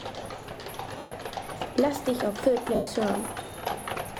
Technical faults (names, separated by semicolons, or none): lost LE Audio frames